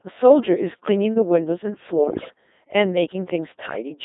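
From start to end the speech passes through the Codec 2 vocoder, confined to roughly 250 Hz to 3.7 kHz and heavily damaged. The robotic, buzzy tone is consistent with a rate near 2.4 kbit/s. The decoder rebuilds the sound from sine waves using only pitch, voicing, energy and a spectral envelope, so the original waveform is gone. That sets it apart from a conventional low-bitrate codec, which keeps the waveform and smears or gurgles it. Here the result is synthetic throughout.

From 2.04 to 2.34 s come bit errors on digital voice radio, at an error rate of around 7 percent. Flipped bits corrupt the parameters of a dozen or so frames. The sound lurches in pitch, level and tone colour and breaks into bleeps, warbles and robotic gibberish. Unlike packet loss, there is no silent gap or frozen repetition. The decoder keeps producing sound, just from wrong numbers. A shorter, milder burst follows at 3.66 to 3.90 s, at around 5 percent, with the same jumping, warbling character.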